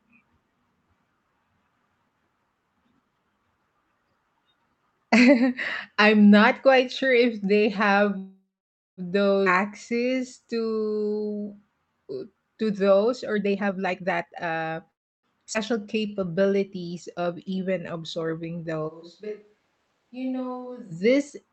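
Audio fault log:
8.17–9.00 s, call audio freeze. The last sound is carried on as a fading buzz for a moment. Then about 0.53 s of silence follows. The whole hold lasts 0.8 s. The cause is likely packets held up on the way, so the jitter buffer ran dry and the receiver had to fill the wait. When audio resumes it picks up where it stopped. Nothing is lost. The sound is simply 0.8 s late from here.
9.45–9.49 s, skip ahead. Playback jumps forward with only a tiny 5 ms join. Roughly 0.4 s of sound is gone. The two sides butt together almost directly. The receiver dropped a stretch while later audio was already queued. This claws back about half of the delay built up by the freeze just before.
9.92–12.50 s, jitter buffer slow-down. The sound runs at 86% speed with the pitch unchanged. Sounds are drawn out. The buffer was building a reserve by repeating single pitch periods and bits of pauses many times over. 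In all, 360 ms is added across the stretch.
13.33–14.78 s, jitter buffer speed-up. The sound rushes at about 150% speed, pitch unchanged, and feels hurried. Too much audio had piled up in the buffer. The receiver trimmed short slices of one or a few pitch periods over and over. Roughly 0.7 s is cut in total to shrink the delay.
14.91–15.26 s, call audio freeze. A short fill of 325 ms, nearly all silent at about 320 ms. The cause is again likely a stall in arriving packets. The sound resumes where it left off, with nothing missing, 325 ms later.
15.53–15.57 s, skip ahead. A 10 ms seam joins two points. Roughly 0.1 s of sound is skipped, pulling the delay back down.
15.80–16.70 s, jitter buffer slow-down. A shorter stretch at 88% speed, same pitch. 117 ms of repeated pitch periods and pause fragments stretch the sound out to rebuild the buffer.
18.90–20.90 s, switch to a distant microphone. 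The sound turns suddenly roomy and hollow, with thinner bass. It drops about 10 dB in level. Room noise sits roughly 35 dB under the speech. The close microphone's signal likely failed, leaving a pickup further away. The change back at 20.90 s is just as abrupt.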